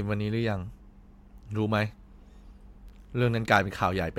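Nothing stood out on listening to this recording of speech.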